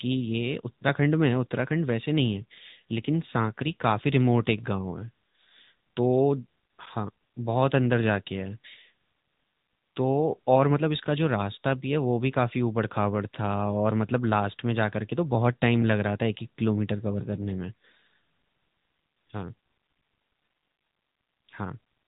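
From start to finish the speech runs through the AMR narrowband mobile codec, so nothing gets past about 3.8 kHz and the voice sounds boxed in. The codec's pulse-driven vocal-tract model leaves a plainly audible buzzy, synthetic edge, which fits a mid-rate mode around 10.2 kbps.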